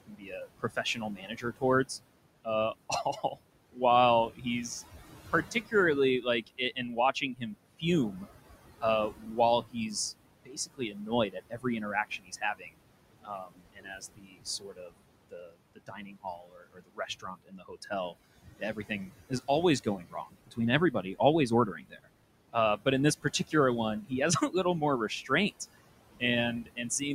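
Noise suppressor artifacts run throughout: the background, sitting about 15 dB below the speech, is pulled down by about 21 dB between phrases and swells back under them. This pumping follows the speech, which sets it apart from steady room noise. Speech cut by the noise suppressor occurs in six spans: 0.07–1.9 s, 2.45–4.46 s, 5.3–12.7 s, 13.23–21.2 s, 21.76–25.53 s and 26.2–27.02 s. In each, soft consonants and word endings drop by up to about 16–22 dB and sound swallowed, roughly four seconds' worth during 13.23–21.2 s. These are dips within the speech itself, not gaps or dropouts.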